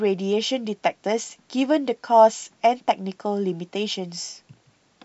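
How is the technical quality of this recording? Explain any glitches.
No glitches can be heard anywhere in the recording, and the signal stays technically sound throughout.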